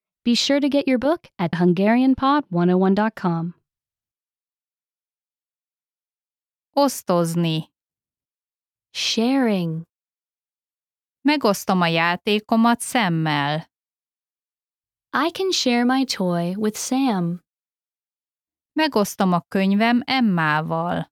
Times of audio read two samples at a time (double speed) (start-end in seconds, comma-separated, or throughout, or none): none